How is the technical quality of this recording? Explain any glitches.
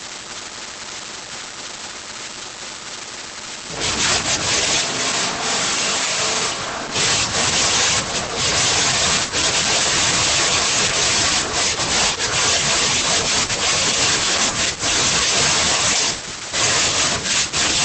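Quality is held back by heavy codec processing across the whole recording, plus a short stretch where the pickup seems to change.

Opus voice compression runs throughout: at 12 kbps in SILK wideband mode the coder trims everything above roughly 8.8 kHz and quantises the excitation coarsely. That leaves the speech muffled and a bit hoarse, with a faintly robotic edge that's plainly audible.

From 4.81 to 6.95 s there's a switch to a distant microphone, likely because the close mic dropped out and a farther one stood in. The voice suddenly goes roomy and hollow, thinner in the bass, about 5 dB quieter, with faint room noise roughly 35 dB under the speech.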